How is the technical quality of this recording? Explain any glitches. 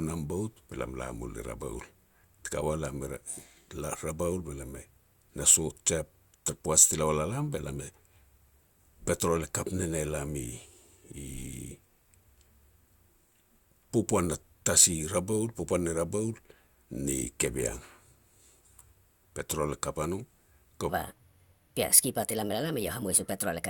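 One glitch affects the final stretch. From 20.89 s to the end at 23.70 s there is a section at the wrong speed: playback was likely locked to the wrong clock, running 1.31 times too fast. The speech abruptly jumps about five semitones higher and sounds hurried and squeaky.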